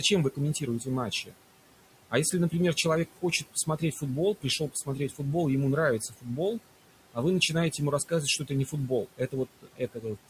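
A noise suppressor runs throughout this speech recording, pulling what it judges to be steady noise down by about 18 dB frame by frame, so the room noise, about 16 dB under the voice, sinks in the gaps and swells under speech. The same noise suppressor also cuts speech, mistaking soft parts of it for background and ducking them by about 13 to 18 dB. This happens at 0.0–1.34 s, 2.1–2.85 s, 3.22–4.02 s, 4.41–5.2 s, 6.0–6.61 s just before "а вы", and 7.71–10.29 s just after "а вы". Within each span, parts of the speech sound swallowed for brief moments, adding up to under a second in the final stretch.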